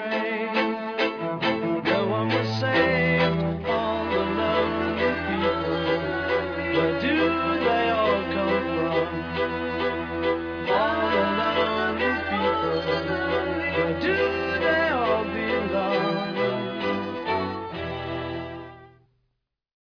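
Nothing in the signal points to a technical problem at any moment of the recording.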